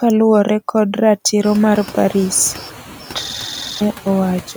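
A noise suppressor runs across the whole clip, judging each frame's bands against a steady-noise estimate and pulling them down by about 7 dB. The room noise, which swells by about 14 dB near 1.5 s and then sits about 19 dB below the speech, ducks in the gaps and swells back under the words.

From 3.25 s to 3.81 s the system hangs: the computer or driver stops feeding new audio while the sound hardware keeps replaying the same ring buffer. A 46.44 ms slice, which fits a 2048-sample buffer, repeats exactly about a dozen times at 21.5 Hz. The result is a machine-gun-like stutter with a buzzy quality, and about half a second of the real audio never arrives.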